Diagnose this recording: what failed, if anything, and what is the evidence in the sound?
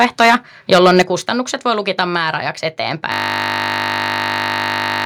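Microphone overload at the converter: harsh, crackling flat-topped peaks from 0.00 to 0.35 s and 0.72 to 1.02 s, likely input gain about 6 dB too hot. The crackle sits only on the loudest moments, not spread across everything as codec distortion would be.

Microphone volume stepped down in call processing: level drops instantly by about 7 dB at 1.02 s, right after the distortion, then about 1 dB at 2.04 s, likely automatic gain correction. It is an abrupt step, not a gradual fade.

System hang loop at the driver or buffer stage: from 3.12 s to the end, one 20 ms piece repeats identically, giving a steady 50 Hz buzz. Exact, fixed-rate repetition separates it from irregular network packet-loss concealment.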